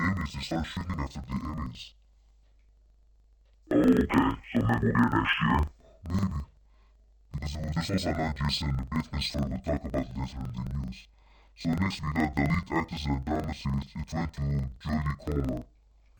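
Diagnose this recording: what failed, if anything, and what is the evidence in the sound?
Interleaved audio read as planar runs throughout the speech, a sample-format conversion fault. Each 42.67 ms block, which fits a 2048-sample buffer, is split into halves played together at half speed, so the sound drops an octave, doubled and choppy at 23.4 Hz.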